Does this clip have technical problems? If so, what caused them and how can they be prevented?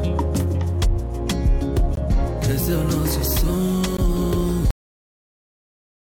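Yes. Gap between stream segments: timestamps of consecutive two-second segments left small holes, filled with silence, so hard-edged dropouts of 18 ms at 1.95 s and 16 ms at 3.97 s interrupt the sound. Aligning segment timestamps exactly, or having the player bridge small discontinuities instead of inserting silence, prevents this.

Cut-off end: the final buffers were never written or played, so at 4.71 s the audio stops mid-sound and falls straight to digital silence without any decay. Flushing and closing the output completely before the stream or file is finalised prevents this.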